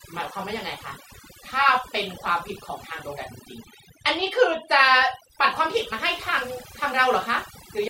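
From start to finish, the speech carries overdone noise removal. A noise reduction stage was pushed far too hard on a noisy recording, so any frequency band sitting close to its idea of the noise gets pulled right down or switched off, and the softer parts of the voice are stripped away along with the noise. The gaps between phrases fall to near silence scattered with twinkling specks.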